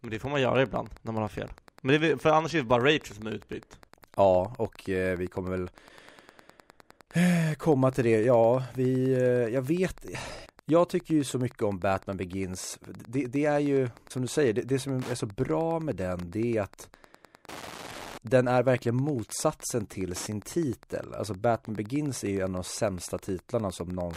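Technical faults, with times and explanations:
Throughout, Wi-Fi interference: a steady ticking close to ten times a second runs under the speech at roughly 25 dB below it. A nearby Wi-Fi radio's beacon, sent every 102.4 ms, is being picked up and rectified by the audio circuit, turning each radio burst into an audible click. On a spectrogram this appears as thin, evenly spaced vertical broadband lines about 0.1 s apart; on the waveform, as a regular train of small spikes.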